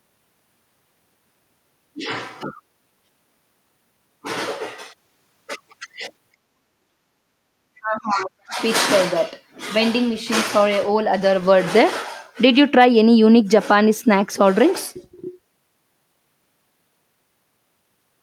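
From 6.62 to 7.06 s the speech sinks by something like 35 dB, and again from 7.79 to 8.59 s it falls by roughly 40 dB for most of that stretch. Both are likely speech suppressed in double talk, where the canceller, unable to tell the talker from the loudspeaker echo, turns both down. Between them, at 7.34 to 7.49 s, only the room sound drops, by about 20 dB, and then returns. This is background gated by the echo canceller: the hard muting hits the background while the loudspeaker plays, not the voice itself.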